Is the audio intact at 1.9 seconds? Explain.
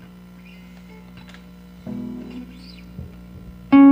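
Yes, at 1.9 seconds the audio is intact, with no dropout, click, distortion or other fault at that moment.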